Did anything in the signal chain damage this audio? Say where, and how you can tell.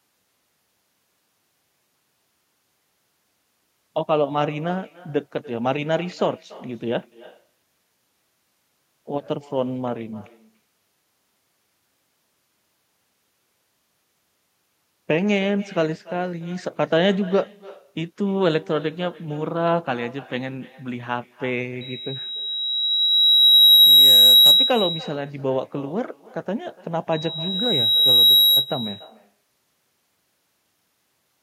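Yes. The call processing lacks an echo canceller throughout: every phrase returns roughly a third of a second later as a thinner copy about 18 dB below the speech. Unlike room reverberation, it is a distinct delayed repeat from the far loudspeaker travelling back through the network.

Loudspeaker feedback squeal appears at the playback end from 21.81 to 24.95 s and from 27.12 to 28.72 s, a pure 3.9 kHz tone that swells over a second or two to well above the speech. One frequency's loop gain exceeds unity, so it grows instead of fading like echo.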